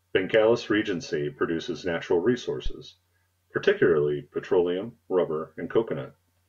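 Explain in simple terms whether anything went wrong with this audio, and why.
A phantom power thump: the microphone's power supply was switched on or off on a live input, and that sudden jolt passed straight through. Just after "produces natural", at 2.66 to 2.72 s, you hear a short, deep thump that dies away within about 13 ms.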